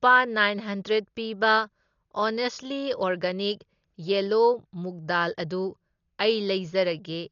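From start to end, the speech sounds dull, with nothing above 7 kHz. Rough, fluttering noise clings to voiced tones. This is likely Dolby Digital compression, which fits a low bitrate of about 40 kbps. The encoder dropped many frequency lines, and the decoder filled them with noise.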